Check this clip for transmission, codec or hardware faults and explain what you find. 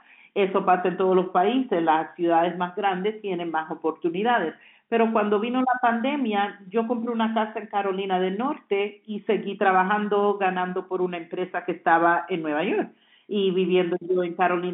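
No transmission, codec or hardware faults are audible; the speech sits in the normal G.711 mu-law telephone band of roughly 200 Hz to 3.5 kHz at 64 kbps, with nothing above 3.8 kHz, as that format dictates.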